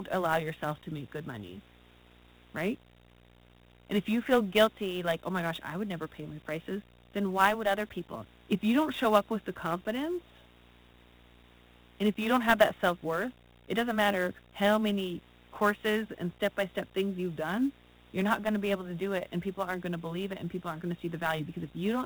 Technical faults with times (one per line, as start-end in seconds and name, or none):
0.00-22.06 video or display buzz
0.00-22.06 Dialogic VOX ADPCM
0.00-22.06 sample clock jitter